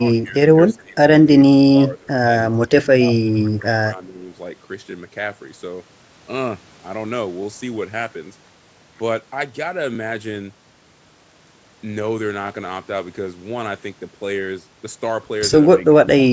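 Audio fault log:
0.23–0.36 s, 0.77–0.97 s, 1.72–2.09 s, 2.55–3.02 s, 3.28–4.31 s and 15.89–16.07 s, speech suppressed in double talk: the speech dips by about 20 dB (only about 10 dB at first) and drops out in pieces. This is likely an echo canceller turning down the near talker while the far side speaks.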